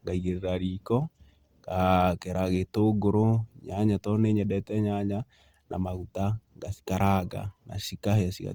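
Throughout the speech, the sound is grainy and rough, with a noisy fizz over the tones, likely Opus compression in its music mode at a low rate, around 24 kbps. Unlike MP3, there is little swirling, because empty bands are refilled with noise rather than left as holes. Bandwidth stays full, reaching about 20.2 kHz.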